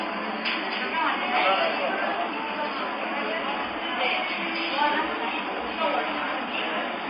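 From start to finish the audio has plainly audible compression damage, most likely MP3 compression at a low rate, something like 24 kbps. The treble is gone, with nothing above about 5 kHz. Short of bits, the encoder drops quieter frequency lines and lets them flicker in and out from frame to frame. That gives a watery, swirling texture with metallic chirps on bright, hissy parts, and sharp onsets come out smeared.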